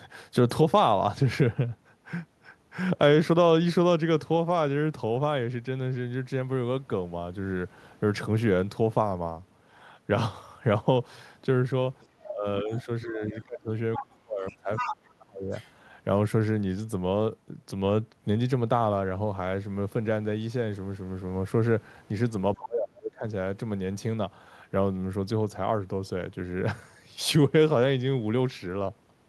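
From 12.24 to 12.29 s a faint second voice appears under the speech. This is the other side's voice leaking through. Its likely cause is loudspeaker echo that the echo canceller did not fully remove. It returns at 12.71 to 12.83 s, 13.96 to 14.03 s, 14.47 to 14.95 s and 15.51 to 15.72 s. Most scraps are quiet and brief. The one at 14.47 s is nearly as loud as the talker.

From 12.28 to 15.53 s the talker's speech is also suppressed in double talk. The level dips and drops out in pieces, roughly 30 dB at its deepest. About two seconds are affected in total. With both sides active, the echo canceller likely could not tell its own talker from the echo and turned both down. The same dipping returns from 22.56 to 23.24 s, just as deep, across most of that stretch.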